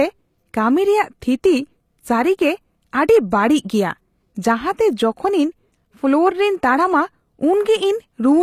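Speech with HE-AAC compression throughout, likely at about 24 kbps: nothing above 14.9 kHz, and the treble that remains is rebuilt rather than cut, so s sounds turn gritty and metallic.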